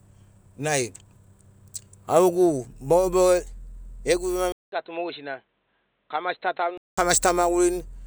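Speech that turns dull and boxy at 4.52 s after a 200 ms gap, losing everything above 4.1 kHz, dropping roughly 10 dB and gaining a faint new noise floor until 6.98 s. The likely cause is the input switched to a poorer device partway through.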